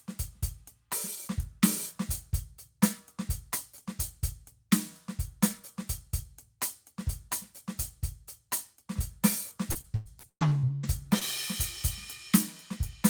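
Packets were lost or arrived late again and again from 9.71 to 11.23 s, a stretch of repeated packet loss that gives the music a robotic sound. Each hole was patched by stretching out the last received audio, with around ten separate dropouts, the longest 116 ms, and about a third of the span made up of this filler. The music turns choppy, with fragments missing and brief smeared repeats in their place.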